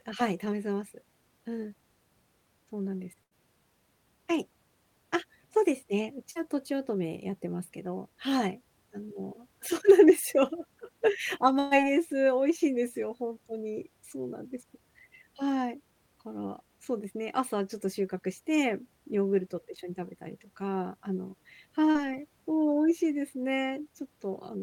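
A speech recording with four packet-loss dropouts of two kinds. Bursts of packet loss hit at 3.23 to 3.34 s and 11.59 to 11.74 s, where about 80 ms and then 120 ms of audio never arrived in time. The receiver stretched the last sound across each gap and let it fade before picking up further on, so the speech is heard as a held buzz or hiss that skips ahead. A spectrogram shows frozen harmonics or smeared noise decaying into a hard edit. Short concealed packet loss occurs at 6.31 to 6.38 s and 21.91 to 21.98 s, each hole about 40 ms, filled by extrapolating pitch or shaped noise and blending back. It comes across as a brief smear or wobble that can swallow a consonant, visible as a short patch of repeated, slightly blurred texture in the waveform.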